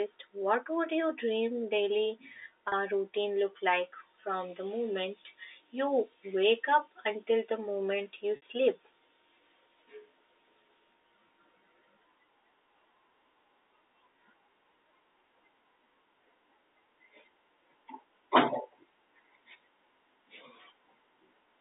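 At 2.68 s, right after "would your dream daily" and before "routine look like from", the sound briefly stalls into a held, slightly buzzy tone for about 40 ms. At 8.36 s, after "until the moment you", a similar 60 ms hold starts to fade toward silence before the sound resumes with a quick cross-fade. Both are packet loss with pitch repetition: the receiver covered the missing audio (which fits two and three 20 ms packets) by repeating the last pitch period through the narrow 250 Hz to 3.7 kHz telephone band of the G.711 line.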